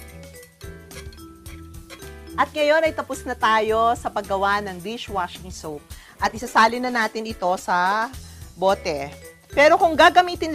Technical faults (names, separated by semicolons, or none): call bitrate drop